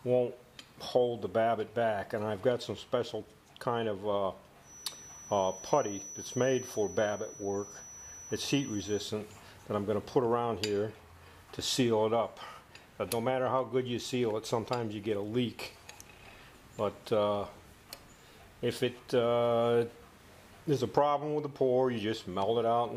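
From 4.59 s to 9.15 s a thin, steady tone near 5.9 kHz sits behind the sound, about 15 dB below it and slowly swelling and fading in level. This is a feedback whistle, likely from the loudspeaker-to-microphone loop idling just at the edge of feedback, so one frequency keeps ringing. Unlike a full feedback howl, it never climbs or runs away. Unlike a fixed electrical whine, its level drifts.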